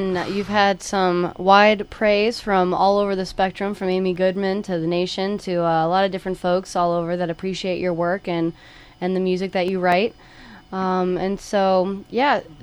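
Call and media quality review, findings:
CD scratch ticks, 3.44–4.40 s and 9.44–10.16 s. Five then four short ticks, about five a second, each only a few milliseconds. Probable disc surface damage. Once per revolution, errors exceed correction, and the player interpolates or mutes the samples.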